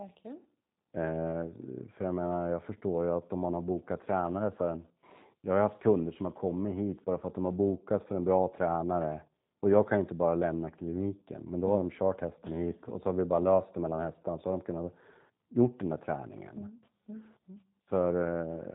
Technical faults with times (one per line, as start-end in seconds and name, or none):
0.00-18.75 G.729 codec